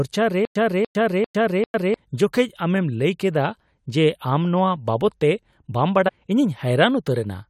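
From 0.45 to 1.94 s, a playback stall that likely replayed the last fragment at each retry produces stutter with silent gaps: a 292 ms burst of speech returns four times every 396 ms, separated by 104 ms of digital silence. At 1.73 s, and again from 6.07 to 6.09 s, damaged data in the compressed stream knocks the decoder out of frame sync, leaving a brief glitch.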